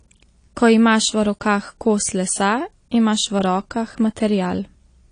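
Throughout, the speech sounds dull and smeared, with nothing above 9.8 kHz. Unlike a clean low-pass filter, sibilants warble and fizz, likely from AAC compression at a low bitrate.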